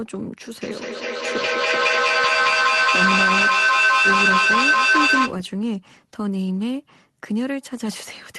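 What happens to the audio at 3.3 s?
At 3.3 s the speech is caught in a feedback echo between two devices, running from 0.62 s to 5.42 s. A second device in the room plays the call back, and this microphone picks it up again; its echo canceller only removes its own playback. Each word returns roughly every fifth of a second, thinner and ringing. The loop is loud, peaking about 8 dB above the speech, so the repeats stack up rather than decaying.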